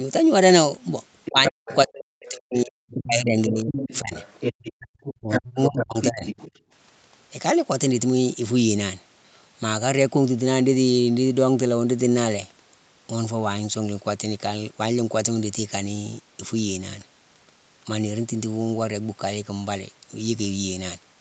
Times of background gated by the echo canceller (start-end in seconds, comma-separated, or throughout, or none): 4.87-4.92, 6.60-6.71